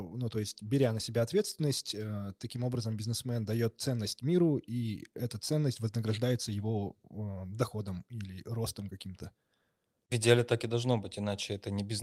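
No technical faults can be heard anywhere in this speech recording.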